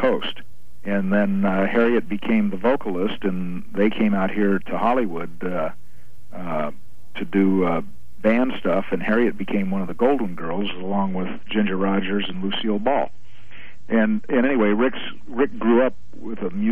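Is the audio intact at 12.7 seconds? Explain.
No, 12.7 s falls inside a stretch of adaptive stream at a lower bitrate, running from 10.40 s to the end. The stream drops to a leaner version mid-play, so the treble suddenly vanishes above 8.3 kHz with no gap, and a swirly, smeared texture sounds like roughly a 32 kbit/s MP3.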